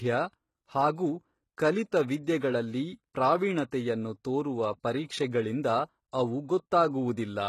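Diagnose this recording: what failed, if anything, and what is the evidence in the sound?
Codec stage. Throughout, nothing sounds above 12.3 kHz, and s sounds turn gritty. Likely HE-AAC compression: treble copied from lower bands, fitting 16 kbps.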